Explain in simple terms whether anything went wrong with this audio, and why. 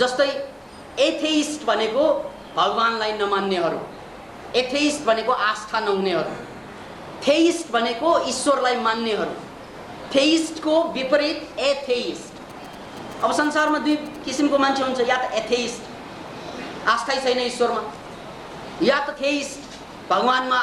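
Something did go wrong between 12.50 and 14.40 seconds: a burst of GSM signalling interference. A 2G mobile phone nearby was exchanging short radio messages with the network, and the audio wiring picked up those pulses and turned them into sound. You hear it as a galloping dit-dit-dit of brief buzzes, each a low hum that vibrates about 217 times a second. The buzzing sits clearly below the main sound.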